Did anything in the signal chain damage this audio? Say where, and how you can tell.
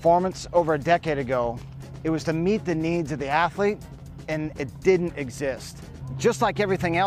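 No, nothing in the signal chain audibly damaged this audio.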